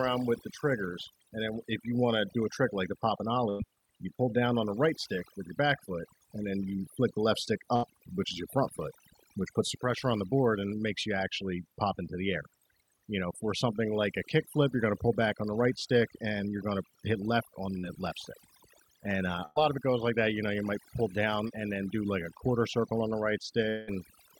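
Throughout, the gaps between phrases sink to near silence dotted with faint twinkling specks. That is overdone noise removal. A noise reducer set far too strong pulls individual frequency bands down or off whenever they sit close to its noise estimate, so the hiss goes and the quieter parts of the speech go with it, leaving the hollow, swirling texture heard here.

From 3.49 to 3.62 s, just after "like the pop and", the sound holds briefly and fades before the speech resumes at "you pull down on". The same held, dying tail comes at 7.76 to 7.85 s and again at 19.45 to 19.58 s. Each is a burst of packet loss. Several consecutive packets arrived too late or not at all, about 100 ms of audio at 3.49 s and 19.45 s and about 80 ms at 7.76 s. The receiver stretched the last sound to cover the hole and faded it, then skipped ahead, so the missing stretch never plays.

Two shorter events are only a smear or wobble. 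One comes at 17.79 to 17.85 s, between "to hit left on" and "left stick", and the other at 21.48 to 21.51 s, between "you might pull down" and "and then do like". These are short concealed packet loss. Roughly 40 ms and 20 ms of audio missed the decoder, and the receiver patched each hole from the preceding sound before blending back in.

From 23.69 to 23.89 s, near the end, the last sound is held and decays for about 180 ms before speech returns, with that stretch gone. This is most likely a long network dropout, in which nothing arrived for a sustained stretch and the receiver extended and faded the last sound until the stream came back further on.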